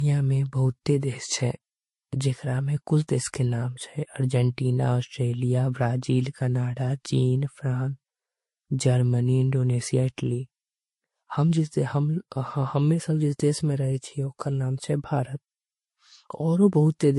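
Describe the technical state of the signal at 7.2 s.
At 7.2 s the speech shows the same damage it carries throughout the clip: a hard ceiling at about 11.3 kHz with nothing above it, plus two distinct layers of coding artefacts. The likely cause is transcoding between lossy codecs, consistent with an MP3 encode near 51 kbit/s later re-encoded as Vorbis near 38 kbit/s. The Vorbis encode spent bits on the MP3 artefacts and added its own. A single low-bitrate encode would leave one artefact character, not two heard together.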